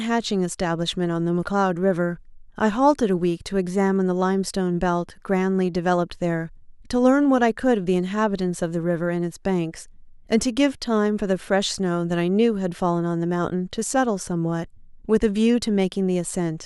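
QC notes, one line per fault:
No technical faults turn up anywhere in this speech recording, and the signal holds steady with nothing calling for correction.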